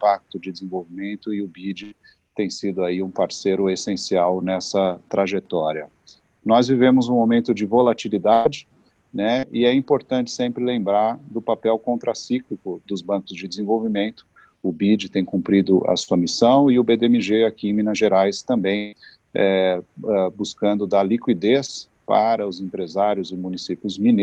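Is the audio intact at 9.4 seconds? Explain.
No, there's a short concealed packet loss from about 9.39 to 9.45 s. Around 40 ms of the call arrived too late, so the receiver improvised roughly that much by extending the preceding sound before easing back in, leaving a brief smear or wobble in the Opus-coded audio.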